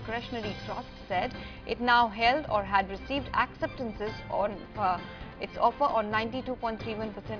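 No technical faults can be heard anywhere in the audio; the signal holds steady and intact throughout.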